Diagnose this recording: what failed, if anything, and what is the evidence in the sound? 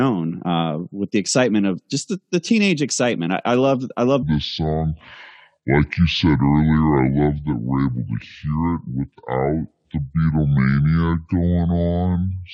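Section at the wrong speed, 4.23 s to the end: speech slows to 0.6x and drops about ten semitones, likely a playback clock mismatch.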